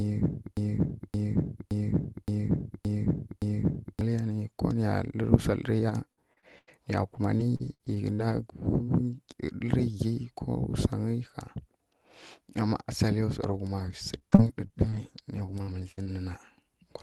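Right from the start the clip is already caught in a broken-record loop. A chunk of about 0.57 s plays back to back, six times over, until around 4.01 s. The player or stream likely stalled and kept resending the last fragment it held, so the speech that belonged in those four seconds never arrives. You just hear the same slice cycling with a mechanical regularity.

Next comes repeated packet loss, with that robotic sound, from 5.89 to 8.38 s. There are nine separate holes, the longest about 88 ms, and each one is papered over by stretching the previous sound. About 15% of that stretch is concealment, so it comes across choppy, with bits missing.

The same thing returns from 13.42 to 16.07 s: nine gaps again, but shorter, topping out at 57 ms and covering about 10% of the span. It's a little less chewed-up than the first burst, but it has the same stuttery, synthetic edge.

Underneath all of this is an Opus call path, which caps the top end at around 12 kHz.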